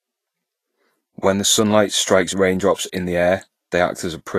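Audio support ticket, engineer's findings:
Grainy, hissy treble throughout the speech, with attacks blurred. Nothing above 14.2 kHz. Likely Vorbis compression: coarse residue quantisation turns high-frequency detail into noise. The damage level and cut-off fit a bitrate near 33 kbps.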